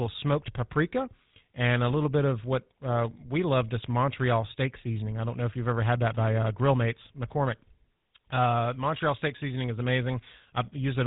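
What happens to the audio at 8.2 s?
At 8.2 s the speech carries the GSM full-rate codec damage present throughout the clip. The codec rebuilds the voice from a vocal-tract model excited by sparse, regular pulses, giving a buzzy, gravelly roughness that is plainly audible. That grain sets it apart from simple band-limiting, which only muffles.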